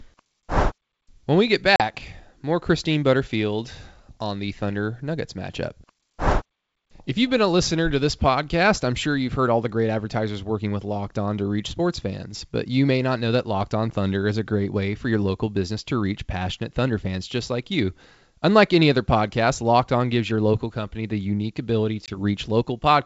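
At 1.76 s, right after "we get", and again at 22.06 s, after "company the unique ability", packet loss on an ADPCM call cuts 40 ms then 20 ms of speech to silence: hard-edged flat gaps in the waveform, blank vertical strips on the spectrogram. The desynchronised predictor then brings speech back with brief, slight distortion.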